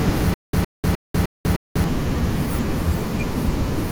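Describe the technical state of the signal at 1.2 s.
At 1.2 s the signal is inside a stutter with silent gaps running from 0.34 to 1.84 s. The same 111 ms fragment repeats five times, each followed by 194 ms of digital silence, a steady 305 ms cycle, likely from a stalled stream replaying its last buffer. Unlike plain dropouts, the burst repeats identically.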